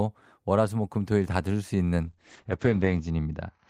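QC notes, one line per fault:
2.06–3.69 s, call bitrate drop: from 2.06 s to the end, the speech turns rough and muffled. A falling bandwidth estimate made the encoder cut its rate from 32 kbps to about 9 kbps, where it stays for the last 1.05 s. With so few bits, each frame is quantised coarsely, giving the watery, grainy texture. The codec also narrows the audio band from 20 kHz to 8 kHz, which removes the air and dulls the sibilance.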